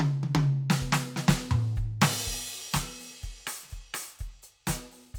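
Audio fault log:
No faults detected in the music.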